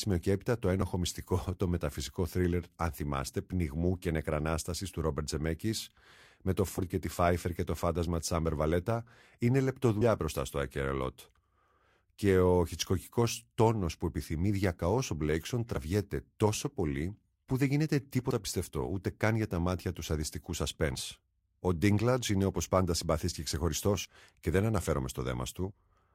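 Compressed frames skipped at 6.78 s (between "με το" and "και τη"), 10.0 s (before "μπροστά στο"), 15.76 s (before "τόσο πολύ που δεν"), 18.3, 20.94 and 24.04 s: missing or rejected frames make the speech jump ahead by a few tens of milliseconds, up to about a tenth of a second. Each join is heard as a sudden jump in the speech.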